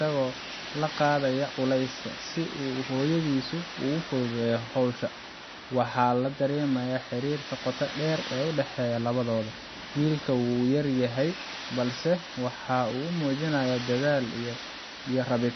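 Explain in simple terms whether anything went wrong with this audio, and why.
Something did go wrong, and it lasts the whole clip. The speech sounds watery and swirly, and nothing is heard above 6 kHz, so it sounds dull. This is likely MP3 compression. Starved of data, the encoder cut the treble and dropped quiet detail.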